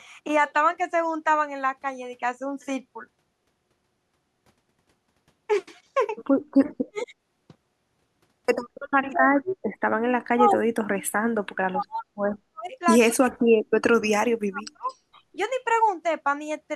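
A speech recording in which the talker is repeatedly pushed down while the far end is active. The first dip runs from 6.89 to 7.13 s, and a longer stretch from 9.07 to 14.87 s loses about 3 s of the voice in total, with drops reaching roughly 40 dB. This is speech suppressed in double talk, likely because the echo canceller could not tell this talker from the loudspeaker echo and attenuated both. Echo leak appears as short delayed copies of the voice: at 6.97 to 7.06 s the copy arrives about 214 ms late and sits only about 15 dB below the speech, while fainter scraps at 9.47 to 9.55 s (217 ms) and 14.87 to 14.96 s (225 ms) are about 30 dB down. Each is likely residual loudspeaker pickup that the echo canceller failed to remove and sent back down the line.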